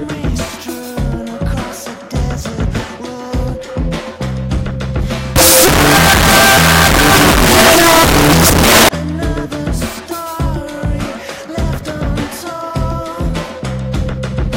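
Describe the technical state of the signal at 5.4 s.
From 5.36 to 8.89 s the signal turns into loud, harsh distortion with quiet passages as loud as the rest, likely signed and unsigned mixed up in 16-bit samples, unlike clipping, which leaves quiet parts quiet.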